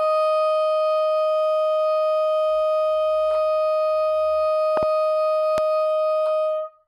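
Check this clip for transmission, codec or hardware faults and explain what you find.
Two hardware faults are present, both loud pops. At 4.77 to 4.85 s a double pop sits on top of the audio, and at 5.58 to 5.60 s a single pop, each peaking roughly 15 dB above the sound. The likely cause is a voltage step from a switch, plug, static or driver glitch, shaped into sharp thumps while the audio continues underneath.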